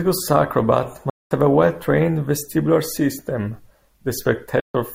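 Two soft-edged dropouts break the speech: the sound fades out and back in around a silent gap from 1.10 to 1.32 s, and again from 4.59 to 4.75 s. This is AAC frame loss with muting. Consecutive frames went missing, which fits runs of roughly ten and seven frames, and the decoder zeroed their spectrum while the overlapping windows smoothed the edges.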